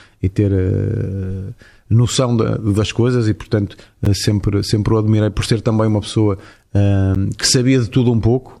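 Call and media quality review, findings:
Block of digital silence at 4.05 s and 7.15 s in speech: two 10.7 ms dropouts to silence, hard-edged, heard as a tick or dip at each. Output buffer probably not filled in time, which fits a 512-sample buffer underrun.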